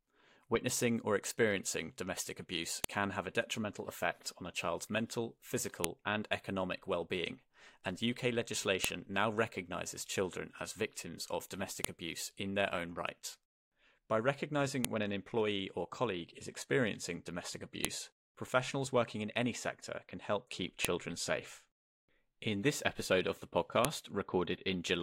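A file header played as audio snaps sharply at 2.84, 5.84, 8.84, 11.85, 14.85, 17.85, 20.85 and 23.85 s, every 3.0 s, where pieces were joined with headers intact. Each shows as a thin tall spike on the waveform and a vertical broadband line on the spectrogram.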